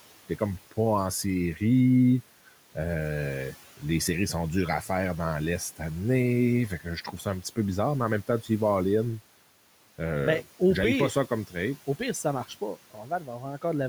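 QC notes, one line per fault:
7.04–7.26 s and 12.94–13.64 s, speech cut by the noise suppressor: brief stretches of speech go faint and swallowed, dipping by about 10 dB and about 9 dB. The suppressor misread quiet speech as noise, pulling it down toward the room noise sitting about 22 dB below.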